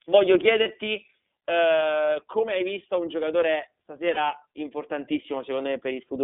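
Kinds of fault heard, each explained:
iLBC codec: speech sounds narrowband, slightly rough and synthetic throughout, limited to roughly 250 Hz–3.5 kHz, which fits iLBC's 30 ms frames at 13.33 kbps.
Lost iLBC frames: brief held, buzzy vowel-like fills at 0.63 and 4.14 s, each about 30 ms, where the decoder repeated the last pitch cycle for one missing frame.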